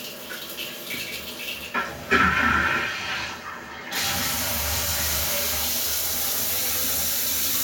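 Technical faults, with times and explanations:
No technical faults can be heard anywhere in this audio.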